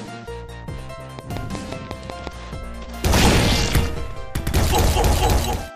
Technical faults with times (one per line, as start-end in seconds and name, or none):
1.19-2.28 train of clicks